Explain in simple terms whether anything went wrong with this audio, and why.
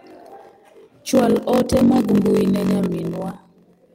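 Two things went wrong. Throughout, there is a block size mismatch (padded): one stage writes blocks shorter than the next one reads, which fits a 1024-sample block. The gaps make a low buzz near 47 Hz, and the speech runs slightly slow, at about 0.94 times normal speed. Unlike a sample-rate error, the timbre stays normal.

There is also a lost packet rebuilt from error correction, from 1.79 to 1.97 s and from 2.65 to 2.67 s. Backup copies filled those moments, so instead of silence you hear briefly rough, noisy speech.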